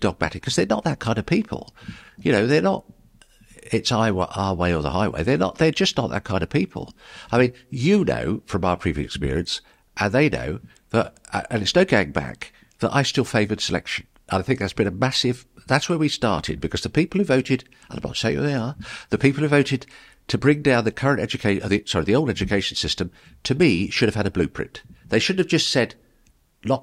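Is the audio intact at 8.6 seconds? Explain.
Yes, the audio is intact at 8.6 seconds, with no fault at that moment.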